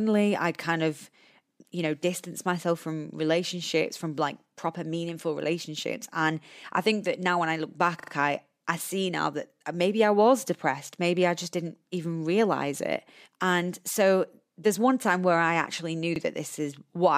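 At 8.0 s, right after "now when I look", a repeated buffer occurs: fresh audio failed to reach the output in time, so the last 40 ms piece played three extra times, stuttering until 8.12 s before "I I see now". At 16.16 s, after "where I actually knew", one extra 40 ms repeat follows. Little or no audio seems lost. On a waveform, identical 40 ms blocks sit side by side with abrupt joins, and a spectrogram shows repeated slices separated by thin vertical broadband lines.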